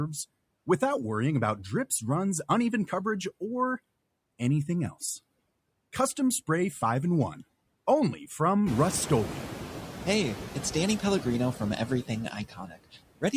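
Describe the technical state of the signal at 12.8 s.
At 12.8 s you're inside a stretch of speech cut by the noise suppressor, running from 12.31 to 12.98 s. The suppressor mistook part of the speech for background and pulled it down by up to about 18 dB, so quiet bits, about 400 ms in total, come out swallowed and faint.

The same suppressor is leaving noise suppressor artifacts here too. It cuts the steady background by about 21 dB between phrases and lets it rise back under the speech. The room noise itself has come up by about 18 dB, since it rose around 8.5 s.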